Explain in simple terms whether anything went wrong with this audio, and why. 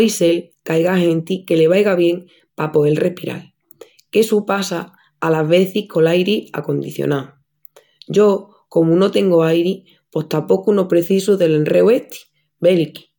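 Nothing went wrong here: the speech comes through steady and continuous, with no audible dropouts, distortion or glitches at any point.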